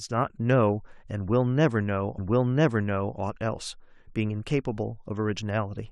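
A stream segment repeated in this speech recording: the player queued the same segment twice, so from 2.17 s to 3.17 s about one second of speech plays again, with a small blip at the jump back.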